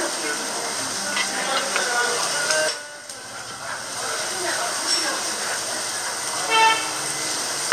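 Damaged data in the compressed stream shows up twice, at 0.35 s and again at 2.67 s. Each time, corrupted bytes make the decoder misread its frames and lose sync, hunting for the next valid header, which leaves a brief glitch in the sound.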